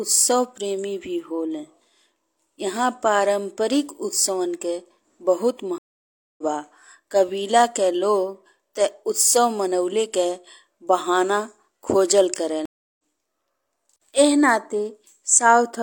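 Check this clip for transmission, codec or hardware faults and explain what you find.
Two stream reconnect faults break this speech clip, at 5.78–6.43 s and at 12.65–13.01 s, just after "बहाना खोजल". Each time the connection drops, the player falls silent for 0.6 s and then 0.33 s, and a fresh decoder resumes roughly 0.4 s and 0.3 s further on, skipping material. The waveform shows flat gaps, and the spectrogram shows blank columns before speech fades back in.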